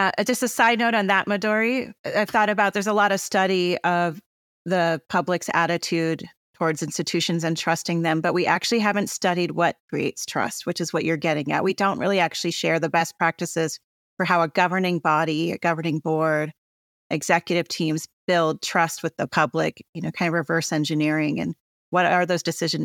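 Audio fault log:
No technical faults are audible anywhere in this speech recording, with the signal holding steady and continuous throughout.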